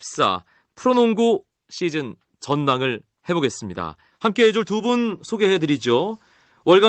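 No technical faults are audible.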